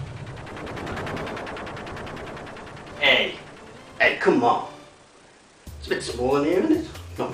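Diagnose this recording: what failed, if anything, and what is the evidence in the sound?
Nothing stood out on listening, and there is no audible failure at any stage of the chain.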